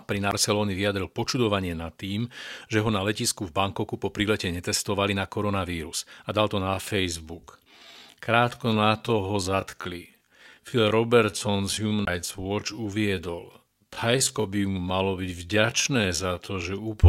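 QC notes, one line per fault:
0.31 s and 12.05–12.07 s, CD skip: a tick and a mute of about 15 ms before "vyjadril počudovanie nad tým", then about 20 ms at 12.05 s, with playback resuming from a different point on the spiral.
6.59–17.09 s, time-stretched section: after "koronavírus a dal to" the pace drops abruptly to about 0.65 of normal speed at unchanged pitch, likely from pitch-preserving stretching that repeats short segments, so the speech drags.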